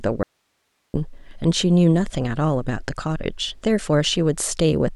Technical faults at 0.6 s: audio dropout to a faint residue

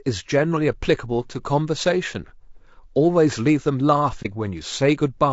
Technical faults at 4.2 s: low-delay AAC compression; AAC frame loss with muting

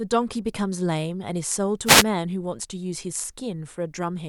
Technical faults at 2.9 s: none

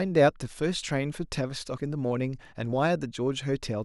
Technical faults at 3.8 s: none

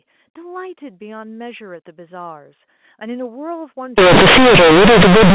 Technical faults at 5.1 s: companded audio read as linear

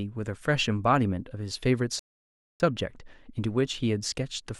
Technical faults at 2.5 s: rebuffering stall

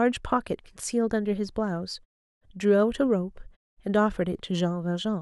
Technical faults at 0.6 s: none

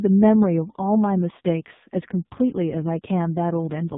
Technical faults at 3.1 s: AMR narrowband mobile codec

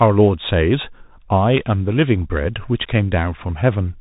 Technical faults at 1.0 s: Bluetooth CVSD headset codec

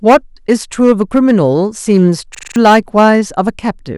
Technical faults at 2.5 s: hard clipping; system hang loop

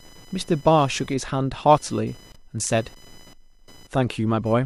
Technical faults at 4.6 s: computer activity noise

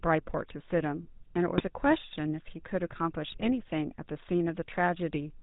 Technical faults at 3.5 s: GSM full-rate codec; GSM bit errors

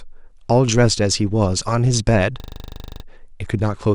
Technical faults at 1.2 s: none

